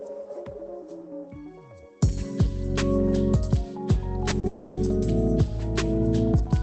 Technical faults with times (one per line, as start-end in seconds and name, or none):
4.29-4.45 short concealed packet loss
4.47-4.79 long network dropout